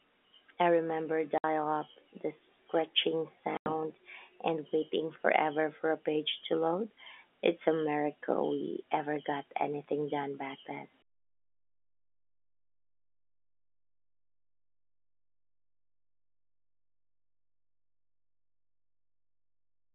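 At 1.38 s and again at 3.57 s the speech drops out for 60 ms and then 90 ms, classic packet loss filled with silence: hard-edged holes, consistent with 30 ms packets.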